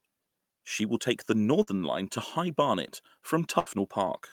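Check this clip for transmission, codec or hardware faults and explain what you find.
There are two bursts of packet loss in this speech. The first is at 1.62 to 1.68 s, right after "will take the", and the second is at 3.59 to 3.77 s. Each time, a short run of audio never arrived, so the receiver stretched the last sound it had and faded it down. That covers about 50 ms at the first gap and about 70 ms at the second. You hear a brief smeared hold, and then the speech jumps ahead with a chunk missing.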